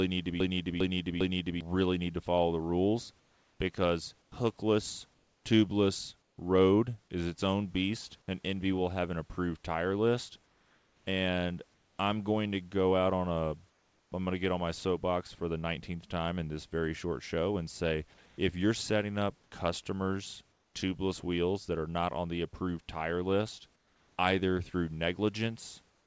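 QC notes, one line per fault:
0.00–1.61 s, broken-record loop: the clip opens already inside a stutter, with one fragment of about 0.40 s replayed exactly, back to back, three times before the audio moves on. The repeats are identical, with no natural variation between them. Whatever should have played in those 1.6 s is missing. The likely cause is a stall in the player, encoder or stream, which kept resending the last fragment it held until fresh audio arrived.
3.20–6.38 s, 10.46–11.98 s, 13.70–14.12 s, 18.26–20.74 s, 23.76–24.18 s, 25.90–26.07 s, comfort noise in place of the background: in each pause the real room background gives way to a smooth, featureless hiss. Where it can be measured, the hiss sits about 3 to 4 dB quieter than the true background. The likely cause is discontinuous transmission. The sender stopped transmitting when it judged there was no speech, and the receiver synthesised noise roughly matched to the background until speech resumed. 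The lower band limit, with nothing above 8 kHz, comes from the call codec path rather than from these gaps.
4.30 s, onset clipped by the voice detector: inside the first comfort-noise stretch, speech restarts abruptly, with about 20 ms of its soft attack gone, so the sound jumps straight in rather than building up. The likely cause is the sender's voice detector reacting late to the returning speech. Those first milliseconds were never transmitted, and the receiver kept playing comfort noise where the onset should have been.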